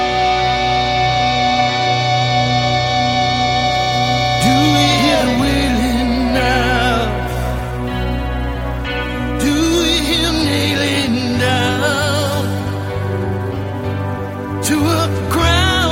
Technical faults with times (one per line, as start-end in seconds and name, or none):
none